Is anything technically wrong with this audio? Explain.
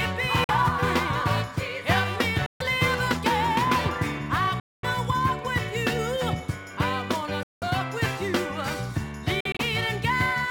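Yes. There are silent holes at 0.44–0.50 s, 2.46–2.62 s, 4.60–4.85 s and 7.43–7.64 s, about 46 to 232 ms long, plus short broken gaps scattered across 9.40–9.61 s. This is likely a Bluetooth dropout: late packets were discarded, so output went silent until good packets arrived. The sound then resumes further on, as if it had kept playing, rather than picking up where it stopped as a stall would.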